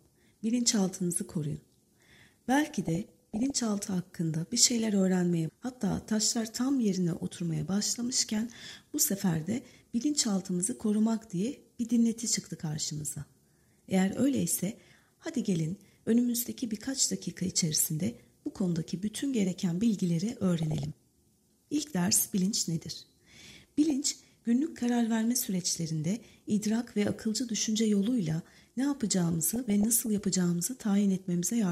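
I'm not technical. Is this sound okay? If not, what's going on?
No. This is DAB burbling: the digital radio signal was weak, so some errors slipped past the receiver's correction and scrambled parts of the compressed audio. Individual slices of the frequency range then get short blips of noise, producing brief bursts of burbling over the audio. It happens five times, each under a second: 2.66 to 3.58 s, 8.29 to 8.77 s, 20.58 to 20.93 s, 23.90 to 24.26 s, and 29.46 to 30.06 s.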